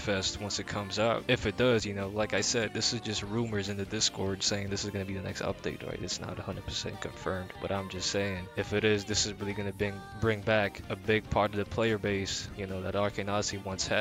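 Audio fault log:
Nothing to log here, as there's no fault anywhere in the clip.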